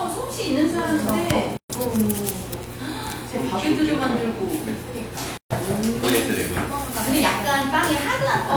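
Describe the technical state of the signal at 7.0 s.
At 7.0 s the audio is intact, with no dropout, clipping, distortion or other fault audible at that moment.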